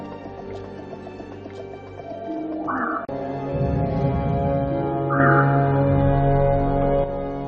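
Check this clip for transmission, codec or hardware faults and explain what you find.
One fault stands out. A sudden gain jump runs from 5.2 s to 7.04 s: the level rises abruptly by about 6 dB, with the background noise rising along with the sound. The likely cause is a digital gain change applied from one sample to the next without a ramp, so the level steps rather than fades.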